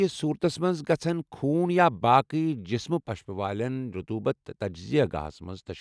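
No dropouts, glitches, clipping, or other technical faults can be heard anywhere in the speech.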